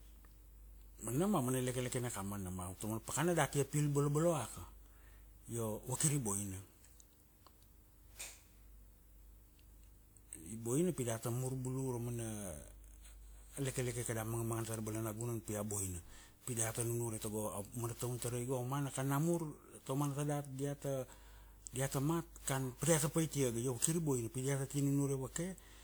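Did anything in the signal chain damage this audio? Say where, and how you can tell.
Yes, at the codec stage, throughout the speech. The sound is swirly, smeared and hollow well beyond what a 128 kbit/s WMA stream alone would produce, and consonant attacks blur, which points to generation loss, likely from around ten successive re-encodes. Each pass requantises on a shifted frame grid, so errors accumulate. A spectrogram would show content reaching about 20.1 kHz but with smeared onsets, while the waveform shows softened transients.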